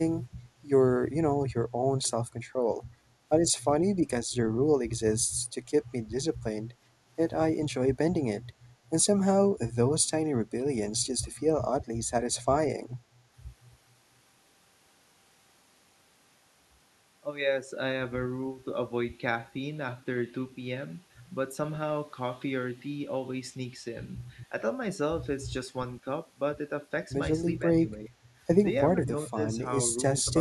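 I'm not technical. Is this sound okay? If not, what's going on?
No. When both sides seem to have talked at once, the echo canceller likely mistook the talker for echo and turned the speech down. This is speech suppressed in double talk. The sound dips or briefly drops out at 6.39–6.54, 27.59–27.63, 27.83–28.2, 28.93–29.39 and 30.24–30.28 seconds.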